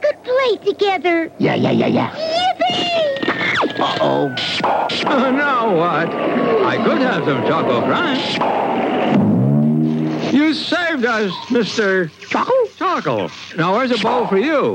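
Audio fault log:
No audible faults found.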